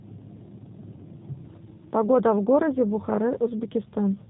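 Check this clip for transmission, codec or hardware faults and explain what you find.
One codec fault runs through the whole clip. G.729 codec compression, probably the G.729A variant at a rate consistent with 8 kbit/s, rebuilds the speech from a vocal-tract model, pitch predictor and sparse pulses and discards everything above 4 kHz, leaving it muffled, rough and plainly synthetic.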